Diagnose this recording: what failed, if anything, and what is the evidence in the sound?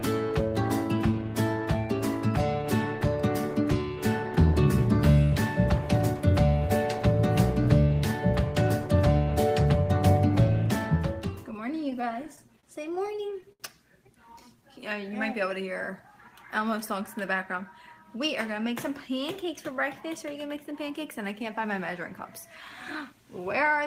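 At the network stage, packets arrived late or too slowly between 11.77 and 13.62 s, repeatedly draining the jitter buffer. The result is repeated stalls (stutter): fourteen brief hitches, the longest 74 ms, about 223 ms in all, where the receiver stretched the last sound. Nothing is lost, but the audio drags.

From 16.78 to 17.62 s the jitter buffer held more audio than its target, so the receiver trimmed short pitch-period pieces in succession. This jitter buffer speed-up cuts around 40 ms, so the sound runs about 4% fast at unchanged pitch.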